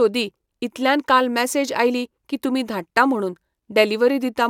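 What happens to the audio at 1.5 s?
Nothing goes wrong at 1.5 s; the speech carries on intact through that moment, with no dropout, click or other fault.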